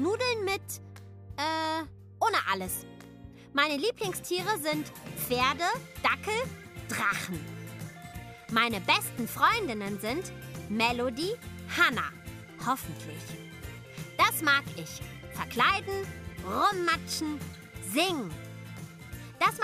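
No technical faults can be heard anywhere in the audio, and the signal stays steady and intact throughout.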